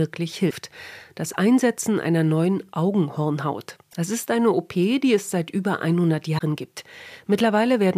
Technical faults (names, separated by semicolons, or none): damaged data in a compressed stream